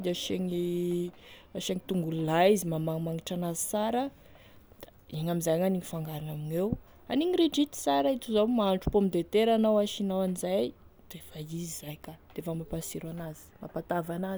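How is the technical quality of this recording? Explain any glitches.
No technical faults can be heard in this speech recording. Nothing in it stands out as a glitch to explain.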